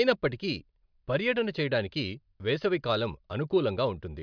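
No technical faults are audible anywhere in this recording.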